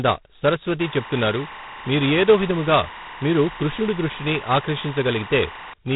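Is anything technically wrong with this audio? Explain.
Yes, there are two faults. G.726 ADPCM runs throughout. The speech is coded as coarse predicted differences, with nothing above 3.9 kHz, and a harsh rasping hiss tracks its level, which fits the 16 kbit/s rate. Timecode bleed runs from 0.80 to 5.73 s. Linear timecode at 24 frames per second leaks in as a square wave flipping between roughly 1 and 2 kHz, a chirping warble about 15 dB below the speech.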